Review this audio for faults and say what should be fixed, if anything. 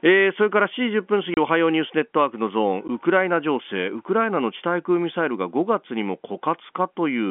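Packet loss filled with silence shows up twice: a 30 ms hole from 1.34 to 1.37 s and a 10 ms one at 2.88 s, with hard edges. That fits missing 10 ms packets swapped for silence. Turning on packet loss concealment would smooth these over.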